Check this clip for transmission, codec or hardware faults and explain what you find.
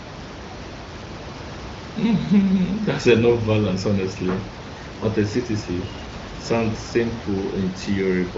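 No transmission, codec or hardware faults found; the room noise sits about 13 dB below the speech, and the band ends near 7.5 kHz as expected from the AMR-WB (HD Voice) path.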